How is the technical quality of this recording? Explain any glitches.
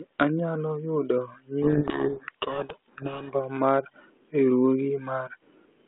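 The recording has one clear glitch, heard over a telephone-band G.726 line at 32 kbit/s. From 1.63 to 3.33 s, a codec payload misread garbles G.726 code words read in reversed bit order, burying speech in harsh distortion that shows as smear across the telephone band on the spectrogram.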